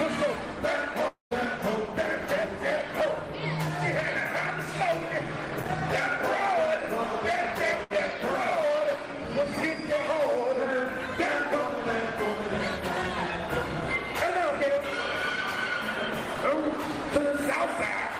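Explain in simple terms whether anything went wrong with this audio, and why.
From 1.07 to 1.33 s the sound breaks off, with the last sound held as a fading buzz or hiss, then about 150 ms of silence. About 0.24 s of audio is gone, likely a long network dropout.

From 7.83 to 7.92 s there is a burst of packet loss. About 60 ms never arrived, and the receiver covered the 66 ms gap by stretching and fading the last sound.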